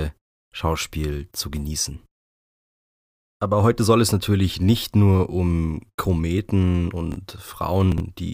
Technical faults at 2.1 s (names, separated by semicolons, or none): none